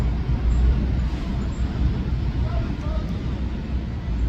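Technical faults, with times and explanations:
No technical faults detected anywhere in the clip.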